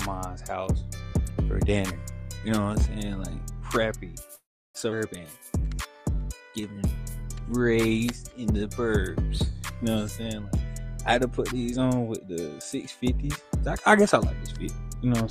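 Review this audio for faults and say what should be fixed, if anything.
Call audio freeze, 4.35 to 4.77 s. The sound stalls and trails off as a brief fading buzz. Then about 0.33 s of silence follows. It resumes where it stopped, so nothing is lost. The likely cause is delayed packets emptying the jitter buffer. A jitter buffer with more headroom, or a steadier network path, would prevent this.

Skip ahead, 4.91 to 4.94 s. Playback jumps forward with almost no gap. Roughly a fifth of a second of audio is missing. The two sides are butted together. A stretch was dropped while later audio was already waiting, cutting about 200 ms of delay. Discarding backlog more gradually, instead of in one cut, would prevent this.

Jitter buffer slow-down, 5.26 to 7.63 s. The audio runs at 91% speed with unchanged pitch. Sounds are drawn out, adding 227 ms. The buffer is repeating single pitch periods to rebuild its reserve. 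Limiting how fast the buffer stretches audio would make this recovery less noticeable.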